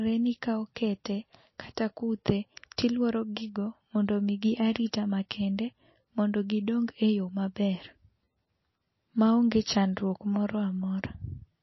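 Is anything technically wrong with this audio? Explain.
Yes. Throughout the speech, nothing sounds above 5.8 kHz, and the damage is plainly audible. This is likely MP3 compression, consistent with a bitrate near 26 kbps. Short of bits, the encoder cuts the treble and zeroes weak frequency lines. S sounds turn dull and watery.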